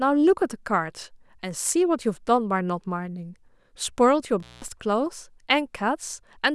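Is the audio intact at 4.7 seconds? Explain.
No. An intermittent contact, a loose plug briefly opening the line, breaks the speech from 4.36 to 4.68 s: a 195 ms dropout to faint hiss, crackling at both edges.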